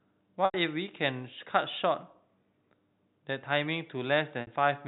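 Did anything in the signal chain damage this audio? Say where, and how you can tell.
Yes. There is packet loss with pitch repetition at the network stage, at 0.45 to 0.54 s (90 ms lost) and 4.41 to 4.47 s (60 ms lost). The receiver looped the last pitch period, giving a held, buzzy sound. A spectrogram shows frozen harmonic stripes fading out, and the waveform shows identical repeated cycles.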